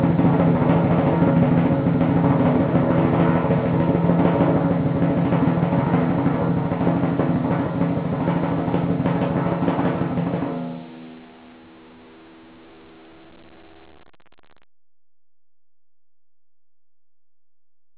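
Nothing faulty is audible anywhere in this music.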